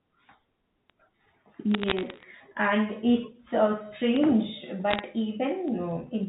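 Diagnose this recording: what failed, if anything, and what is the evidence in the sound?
Word clock ticks run from 0.20 s to 6.26 s at a steady rate of roughly one every tenth of a second, some fifty in all. This is a digital interface fault: the receiver's clock drifts by a couple of hundred parts per million against the sender's, so a single sample is dropped or repeated at each slip.

Bit errors on a digital phone line cause bursts of crackle over the speech from 1.74 s to 2.23 s and from 4.91 s to 5.00 s. This is a line fault: around 0.4 to 0.5 percent of bits in the 64 kbit/s G.711 stream were flipped, and each flip corrupts one sample, with hits on high bits or the sign producing sharp ticks.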